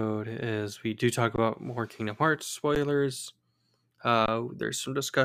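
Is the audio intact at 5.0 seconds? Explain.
Yes, the speech at 5.0 seconds plays through intact, with no fault at that moment.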